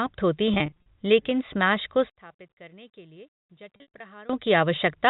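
Between 0.54 and 0.86 s, packet loss with pitch repetition: about 160 ms of audio went missing in short bursts spread over 320 ms, which fits 20 ms packets. The receiver bridged each gap by repeating the last pitch period, so the speech turns briefly buzzy and held just before "लेकिन स्मैश को".

From 2.10 to 4.30 s, right after "लेकिन स्मैश को", the speech drops by about 25 dB and turns faint. The likely cause is one channel inverted, so the two stereo channels cancel each other when summed to mono.

Within that stretch, from 3.76 to 4.00 s, a second packet loss with pitch repetition drops about 140 ms across 240 ms, with runs of up to 60 ms. It gives the already faint sound a held, buzzy quality. The G.711 telephone coding passes the speech band with at most faint added noise.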